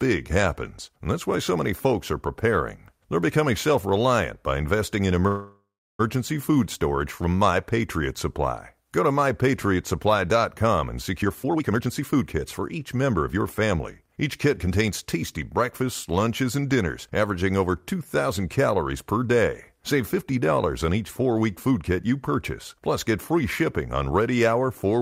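At 5.27 s, packets were likely held up in transit and the jitter buffer ran dry, causing a call audio freeze lasting until 6.01 s. The receiver stretched the last sound into a fading buzz or hiss, then about 330 ms of silence, before the speech resumes where it stopped, with nothing lost.

From 11.22 s to 15.82 s, the jitter buffer had built up excess audio, so the receiver trimmed many short pitch-period slices to catch up, a jitter buffer speed-up. The speech plays at 116% speed with unchanged pitch, sounding hurried, and drops roughly 0.7 s of accumulated delay.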